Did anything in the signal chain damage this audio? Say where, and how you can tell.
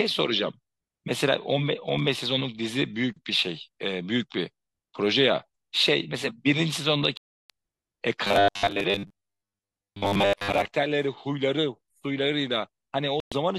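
Yes. Bluetooth dropout at 7.17–7.50 s and 13.20–13.32 s: the speech drops abruptly to silence, then resumes further along, likely from packets lost on the wireless playback link.

Robotic sound from repeated short buffers, 8.25–10.72 s: a rigid metallic buzz at 100 Hz, likely a 10 ms buffer replayed at playback in place of most of the real audio.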